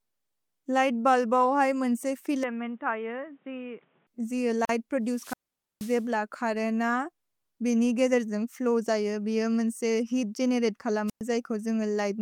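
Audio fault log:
2.43–4.07 s: input switched to a poorer device, likely. The sound suddenly turns dull and boxy. Nothing is left above 3.8 kHz, so the top end is cut away. The level drops by roughly 5 dB. A new background noise appears, around 35 dB under the signal. There is no silence at the change. The sound and noise both shift as though a different, narrower-band microphone or a headset call profile took over, then switched back.
4.65–4.69 s: gap at a join of encoded pieces. A 41 ms hole opens in continuous sound. Its edges are smeared by the codec. The sound then resumes exactly where it stopped, with nothing lost. This fits two separately encoded segments joined without trimming. The encoder's start-up delay and end-of-stream padding both remain as silence at the seam.
5.09–6.05 s and 11.07–11.21 s: wireless microphone squelch dropout. Each begins with a swell of hiss or static. 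Then the output mutes to near silence, for about 478 ms in the first event and 112 ms in the second. The sound then returns. The radio signal from an analogue FM microphone faded too far, so the receiver's squelch shut the output until reception recovered.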